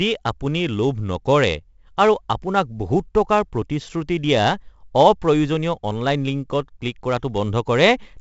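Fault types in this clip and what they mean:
4-bit ADPCM compression: a heavy, gritty hiss rides on the speech and swells with each loud syllable, sharp onsets sound roughened, and nothing remains above 7.8 kHz. Each sample is stored as a coarse 4-bit step from a prediction. The dull top end fits a 64 kbps stream at 16 kHz.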